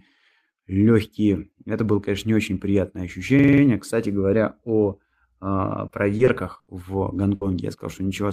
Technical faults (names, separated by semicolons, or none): system hang loop; repeated packet loss (robotic sound); burst of packet loss